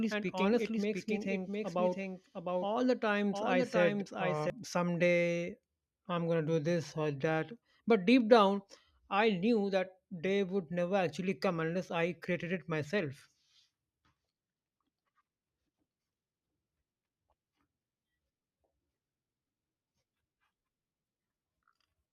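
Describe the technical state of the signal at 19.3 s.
At 19.3 s the speech signal is intact, with no dropout, clipping, distortion or other audible fault.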